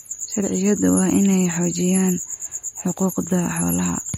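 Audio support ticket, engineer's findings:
MP3 compression, throughout. Plainly audible watery, swirly texture on the speech; nothing above 16.1 kHz. Likely a starved MP3 encode, consistent with roughly 48 kbps: treble cut at a fixed frequency, weak spectral lines zeroed and flickering frame to frame.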